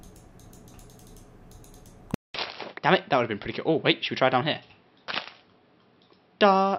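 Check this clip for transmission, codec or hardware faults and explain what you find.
One fault. From 2.14 s to the end the sound turns duller and quieter by about 10 dB, with nothing above 5.6 kHz, faint new background noise and a 0.2 s silence at the change, likely an input switched to a poorer device.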